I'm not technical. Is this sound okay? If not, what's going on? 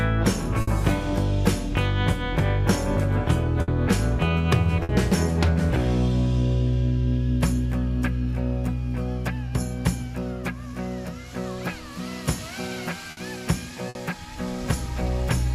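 No. A burst of packet loss hits at 0.61, 3.62, 4.83, 13.11 and 13.89 s: about 60 ms drops out each time, briefly smeared into a fading held sound before jumping ahead.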